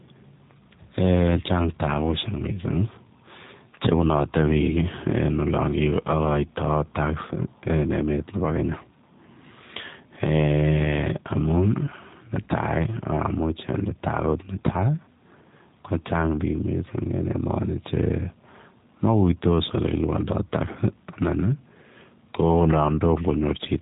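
From the first second to the last, this speech has been through a G.729 codec, and the damage is plainly audible. The codec throws away the waveform and rebuilds each 10 ms frame from a vocal tract filter, a pitch predictor and a few pulses, which fits an 8 kbit/s stream. That leaves the voice slightly rough and synthetic. The band also stops dead around 3.8 kHz, so everything sounds boxed-in and dull.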